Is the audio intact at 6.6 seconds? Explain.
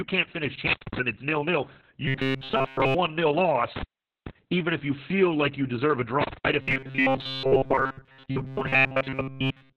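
No. From 6.62 s to the end at 9.77 s the speech turns into robotic sound from repeated short buffers: a rigid, metallic 133 Hz buzz, likely from the software replaying a roughly 7.5 ms chunk while most of the real audio is skipped. A spectrogram shows evenly spaced horizontal harmonics at multiples of 133 Hz, and the waveform repeats one short shape over and over.

The whole clip also carries heavy Opus voice compression. Nothing survives above 4 kHz, which points to narrowband SILK coding at a very low bitrate, around 6 kbps. The speech sounds muffled, hoarse and slightly robotic, and a spectrogram shows a hard ceiling at 4 kHz with blank space above it.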